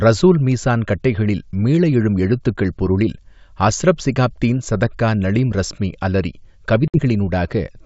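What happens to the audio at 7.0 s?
Right around there, just after "ஸதக்கா நளீம் றஸ்மி அலறி", there's packet loss on the ADPCM call from about 6.88 to 6.99 s: a few packets go missing and are filled with silence. The decoder's predictor and step size drift from the sender's, so the sound comes back with brief, slight distortion before settling.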